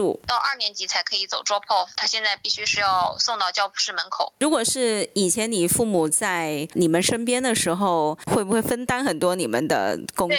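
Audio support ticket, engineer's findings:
Gain pumping, whole clip, 0 to 10.4 s. Gain swing around 15 dB. Dynamics squashed, loud and soft closer in level. Likely cause: input gain far too high, fast limiter/compressor clamping each peak and releasing in gaps.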